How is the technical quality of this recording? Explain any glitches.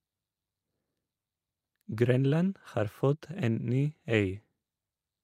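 No glitches or technical faults can be heard here.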